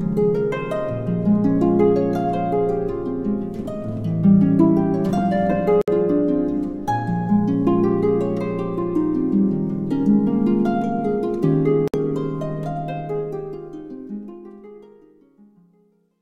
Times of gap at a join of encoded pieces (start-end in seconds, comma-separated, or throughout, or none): 5.81-5.88, 11.88-11.94